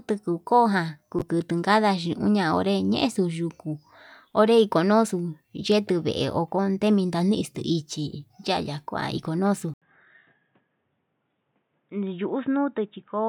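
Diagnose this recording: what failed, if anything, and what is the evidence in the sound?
At 9.74 s an 80 ms gap, then boxy, about 5 dB quieter speech with nothing above 3.8 kHz on the spectrogram: likely an input switched to a poorer device, at driver level.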